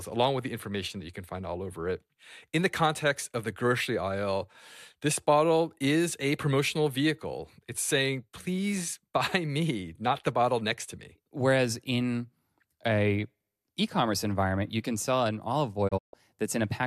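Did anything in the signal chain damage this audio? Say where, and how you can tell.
Yes. A digital broadcast dropout in the reception and decoding stage hits the speech between 15.87 and 16.15 s. The receiver muted after failing to decode frames, with a fade of about 20 ms, leaving roughly 168 ms of missing sound scattered over 240 ms. The longest hole is 144 ms, which fits several frames lost in a row. On the waveform the envelope drops to silence in clean gaps. The spectrogram shows vertical bands with no energy at any frequency.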